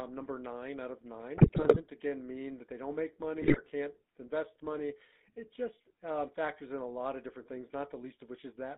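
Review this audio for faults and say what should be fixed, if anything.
The whole clip carries the sound of the GSM full-rate codec. The speech is buzzy and gravelly. The coder models the vocal tract and drives it with a regular pulse train, keeping only a third of the excitation samples. That coarse excitation causes the roughness. The band runs from about 200 Hz to 3.7 kHz, and nothing above that survives. The damage is plainly audible and fits a 13 kbps full-rate link. To prevent it, route the call over a wideband codec such as AMR-WB instead of GSM full rate.

GSM bit errors break up the speech twice. The first burst runs from 1.36 to 1.81 s. The second runs from 3.42 to 3.61 s. In both, the speech turns to squawks, pops and gargling. Corrupted bits reach the decoder, so the filter, pitch and gain values for a frame come out wrong. That bends the spectrum and makes the level jump. The density points to a bit error rate near 5% on a weak radio link. 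To prevent it, improve signal strength or use stronger channel coding and error concealment.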